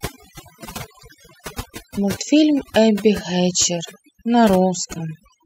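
Throughout the speech, overdone noise removal is at work. A noise reduction stage set too strong pulls individual frequency bands down whenever they sit near its noise estimate. Quiet parts of the voice vanish with them. Pauses fall to near silence with twinkling specks.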